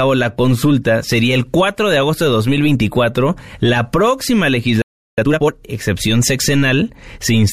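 A playback stall runs from 4.82 to 5.18 s, cutting the speech off mid-flow with about 0.36 s of silence before it resumes. The player likely ran short of buffered audio, or its output thread was briefly blocked, so nothing reached the output until it recovered.

Time-compressed catch-up follows from 5.18 to 5.52 s, as the player clears its backlog by dropping short slices and cross-fading the joins. The speech runs at twice normal speed yet keeps its pitch, sounding hurried.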